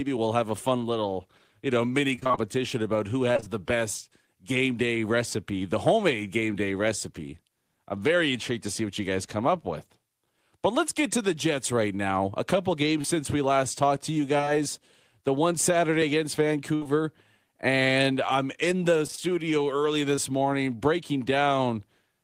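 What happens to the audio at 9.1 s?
Nothing goes wrong at 9.1 s; the speech carries on intact through that moment.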